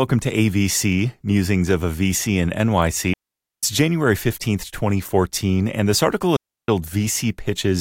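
At 3.14 s the speech drops into near silence until 3.63 s, a gap of about 0.49 s. A second hole runs from 6.36 s to 6.68 s, about 0.32 s. Both are digital wireless dropouts. The radio link lost too much data, so the receiver muted rather than play damaged audio. Each mute fades in and out very quickly. No crackle or noise burst marks either edge. The sound simply vanishes, then returns.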